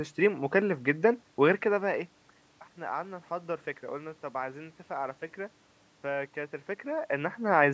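No technical fault can be heard anywhere in this speech recording. The level shifts around 1.5 s and again near 6.5 s as the talker moves relative to the microphone, room noise sits underneath, and the call microphone processing leaves nothing above 8 kHz, all of which is normal.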